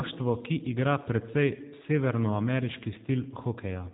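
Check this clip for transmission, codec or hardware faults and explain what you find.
One codec fault runs through the whole clip. The G.729 codec damage is plainly audible from start to finish: speech rebuilt from a vocal-tract filter, pitch predictor and sparse pulses, which fits an 8 kbit/s G.729A link. It sounds rough and slightly synthetic, with nothing above 4 kHz. Unlike simple low-pass filtering, the buzzy, pulse-built texture shows the speech was resynthesised, not just band-limited.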